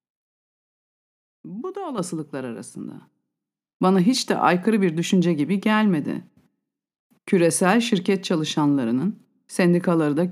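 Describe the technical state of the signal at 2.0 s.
At 1.98 s the microphone volume is stepped up: the call software, judging the input too quiet, raises the device's input gain in a single jump of about 7 dB. Unlike a talker leaning closer, the voice and background noise rise together, instantly rather than gradually.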